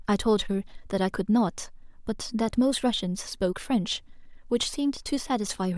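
No technical faults can be heard in this speech recording.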